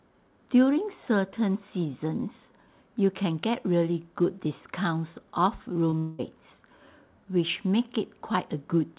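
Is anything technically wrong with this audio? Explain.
Yes. Two closely spaced faults sit around the six-second mark, on top of a call path whose audio stops at 4 kHz, which points to G.711 mu-law at 64 kbps.

Short concealed packet loss occurs from 5.90 to 5.94 s. About 20 ms of audio did not reach the decoder in time, and the receiver extended the preceding sound to cover the gap before blending back into real audio. The result is a brief smear or wobble rather than a clean gap.

The long network dropout runs from 5.98 to 6.21 s. For about 0.2 s the original audio is replaced by a synthesized continuation of the last sound, heard as a buzz or hiss that fades without ever reaching true silence, before real audio returns with that stretch missing. This is likely a network dropout: no packets arrived, and the receiver's concealment filled the entire gap with extrapolated sound.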